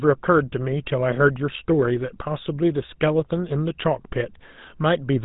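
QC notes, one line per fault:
Throughout, GSM full-rate codec: the speech has a buzzy, gravelly roughness that's plainly audible, and nothing comes through above 4 kHz. That fits the old full-rate coder around 13 kbps, which models the vocal tract and drives it with sparse, regularly spaced pulses.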